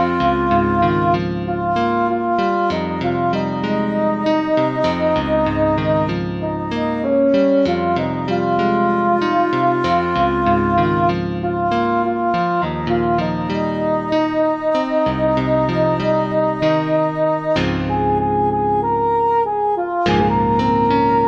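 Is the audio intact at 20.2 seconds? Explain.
No. Compressed frames are skipped from 20.18 to 20.21 s: a couple of whole frames never reach playback, so about a tenth of a second of sound drops out, which fits a frame length near 46 ms. The audio jumps ahead at that point by the length of the missing frames.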